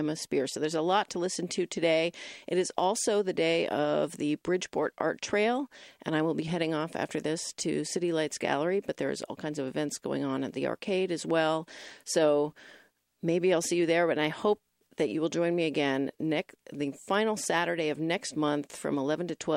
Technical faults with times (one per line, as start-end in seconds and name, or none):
none